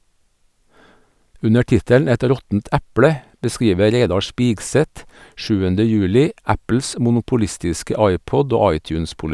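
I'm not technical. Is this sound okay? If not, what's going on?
Yes, nothing in this speech recording stood out as a problem when listening to it.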